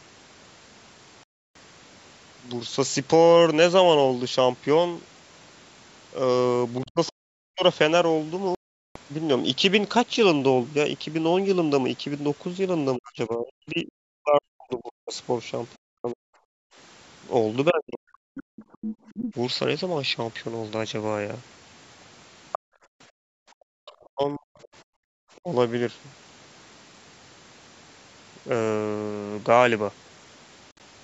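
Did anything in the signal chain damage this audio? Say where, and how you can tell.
Yes. Silent gaps at 1.23–1.56 s and 8.55–8.96 s, each cutting out roughly a third to two fifths of a second, with speech resuming as if it had played on, point to a Bluetooth dropout on the wireless playback link, likely from packets arriving too late. A shorter scattered cluster at 30.71–30.80 s, longest hole about 58 ms, fits the same pattern.

In call processing, the talker's speech dips by about 40 dB at 6.82–7.63 s, 12.97–18.35 s and 23.72–25.48 s. This is speech suppressed in double talk, likely the echo canceller turning everything down while both sides spoke.

A second voice appears faintly at 7.07–7.11 s, well below the talker, and much more clearly at 18.35–19.34 s and 22.52–25.37 s, only slightly below the main speech. This is the other side's voice leaking through, likely loudspeaker sound the echo canceller failed to remove from the microphone.

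The room sound itself drops out briefly, by about 40 dB, within 16.57–19.07 s and 22.59–25.13 s, then returns. This is background gated by the echo canceller, which clamped the microphone hard while the far-end loudspeaker was active, overlapping the leakage periods.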